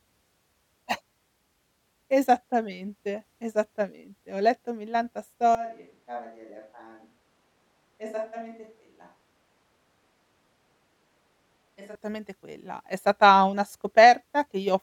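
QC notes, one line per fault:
5.55–11.95 s, switch to a distant microphone: after "letto millanta" the sound turns abruptly hollow and roomy, thinner in the bass and about 10 dB quieter, likely a farther mic replacing the close one. The waveform steps down, and the spectrogram shows faded lows and a noise floor about 30 dB below speech.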